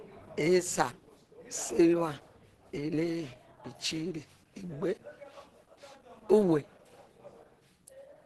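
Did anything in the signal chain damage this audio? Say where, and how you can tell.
Yes. Across the whole speech clip the sound is muffled and hoarse, with plainly audible codec damage and nothing above about 12.1 kHz. This is likely Opus compression at the codec stage, in its hybrid speech mode with a super-wideband cut-off, which fits a low bitrate near 16 kbps.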